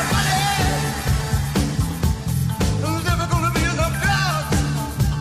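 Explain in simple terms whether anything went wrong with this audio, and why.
Repeated frames, from 2.33 to 2.43 s: a chunk of about 46 ms, which points to a single compressed frame, plays three times in a row. This is heard as a brief stutter, and the clip runs about 93 ms longer than it should.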